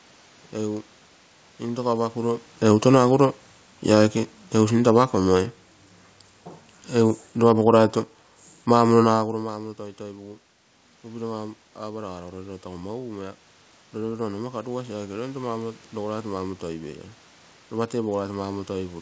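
From 2.61 s to 5.57 s you can hear the automatic gain falling. The AGC decided the input was too loud or its background noise too strong and eased its gain down, about 4 dB over those three seconds. The speech starts out loud and then sinks gradually, with the room noise underneath dropping right along with it. That shared drop is the tell. The level changes around 2 s and 9 s that sound like the talker shifting position don't pull the background down with them.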